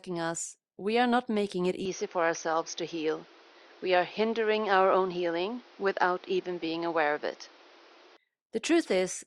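An input switched to a poorer device, likely, from 1.85 s to 8.17 s, just after "are not making it". With no gap at the switch, the speech suddenly loses everything above 6.5 kHz and turns duller and boxier, as a narrower microphone path would sound, and a new background noise sits about 30 dB under the speech. The loudness stays much the same. At 8.17 s the full, clearer band returns.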